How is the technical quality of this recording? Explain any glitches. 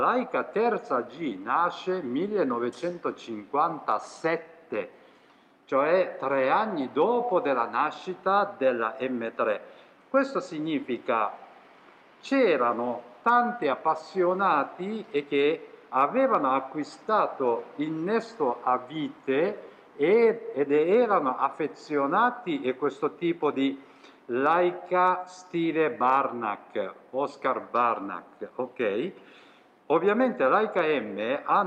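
No audible glitches or faults.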